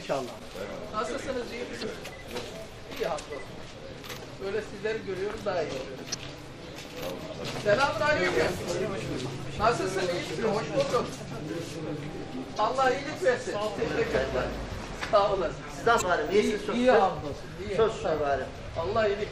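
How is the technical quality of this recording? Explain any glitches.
The recording has two audible problems: a lossy coding character throughout and four brief glitches.

Throughout, the treble is dulled above a fixed ceiling, and the upper detail has a watery, swirling quality, with chirpy edges on bright sounds and softened attacks. The likely cause is MP3 compression at a bitrate around 64 kbps. The encoder runs short of bits, so it cuts the high band and drops weak frequency lines that flicker on and off between frames. This differs from plain low-pass filtering, which dulls the sound without that shifting, metallic texture.

At 1.79–1.84 s, 6.10–6.15 s, 12.55–12.60 s and 15.98–16.02 s there are short squawks or blips, each about 45 ms long. This is damaged data in a compressed stream. Corrupted bytes make the decoder misread or reject frames, lose sync and hunt for the next frame header. 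Unlike the steady compression smear, these are isolated events.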